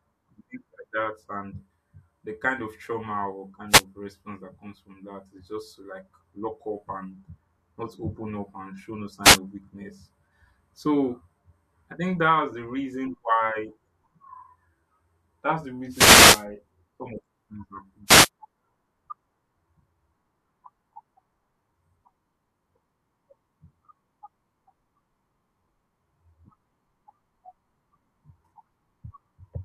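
At 3.69, 9.23, 15.90 and 18.06 s, after "kind of trauma or", "up and show no" and "things happen", wireless microphone noise hits: the FM signal fades through reflection cancellation, receiver noise swells into brief static bursts, the longest about 0.55 s.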